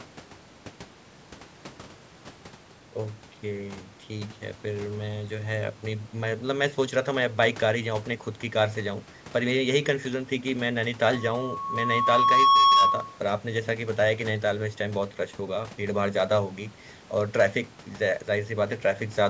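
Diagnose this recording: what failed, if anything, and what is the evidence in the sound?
Loudspeaker feedback squeal in the acoustic loop from playback to capture: the microphone picked up its own loudspeaker with gain above unity at 1.1 kHz, so from 11.14 to 13.19 s a single tone swells to about 10 dB above the speech.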